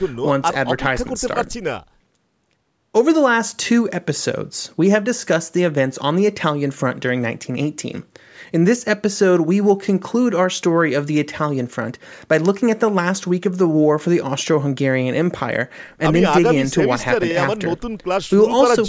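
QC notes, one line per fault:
No faults found; the speech has passed through a call's microphone processing, which has removed the lowest bass and left nothing above 8 kHz, as expected for that path.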